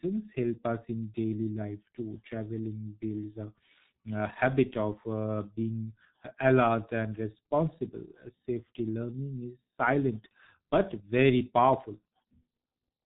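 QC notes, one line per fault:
Throughout, G.723.1 codec, heavy damage: the speech is muffled and hoarse, with consonants smeared together. The coder passes nothing above 4 kHz, so a spectrogram shows a hard ceiling with empty space above it. Its voice model refreshes only every 30 ms, so formant tracks look blocky and stepped rather than smooth, and sibilant bursts appear as dull, short-lived smudges. The thin, rough texture points to a bitrate near 6 kbit/s.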